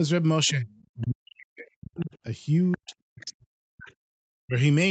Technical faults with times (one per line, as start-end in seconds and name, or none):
0.51-0.68 speech suppressed in double talk
0.70-1.07 other side's voice leaking through
0.97-2.16 speech suppressed in double talk
2.00-2.18 other side's voice leaking through
2.71-2.92 other side's voice leaking through
2.77-4.55 speech suppressed in double talk